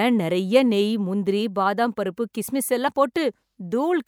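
A speech clip with a small jump forward at 2.87 s, right after "முந்திரி பாதாம் பருப்பு கிஸ்மிஸ்". These are compressed frames skipped: about two frames, each fitting a 24 ms length, were never decoded, dropping roughly 50 ms of audio.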